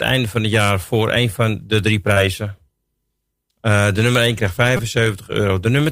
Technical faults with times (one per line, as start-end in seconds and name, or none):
2.13-2.18 short concealed packet loss
2.58 repeated buffer
4.77-4.79 repeated buffer